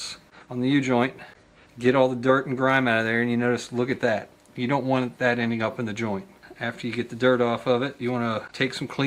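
No technical faults can be heard anywhere in this audio. Nothing in it points to a problem with how it was captured, processed or passed along.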